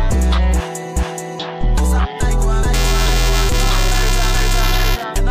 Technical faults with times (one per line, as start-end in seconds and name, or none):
2.73-5.03 buffer tearing